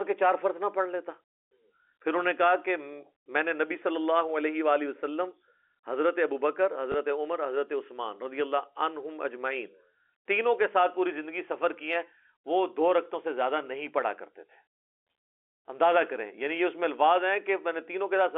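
At 6.92 s a single packet of audio was lost in transit, and the receiver filled the gap by playing the previous packet again, the pattern known as packet loss with last packet repeated. The hole lasts 20 ms, which points to one missing packet. The repeated block sounds like a small blip over the narrow 300 to 3400 Hz band of the G.711 telephone coding.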